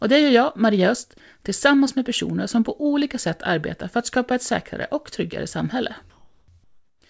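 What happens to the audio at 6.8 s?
From 6.64 to 7.02 s, the real background is swapped for comfort noise. The sender likely stopped transmitting during the pause while the receiver synthesised a steady, featureless hiss about 5 dB quieter. A spectrogram shows a smooth, uniform band ending at 8 kHz, and the waveform goes flat and even.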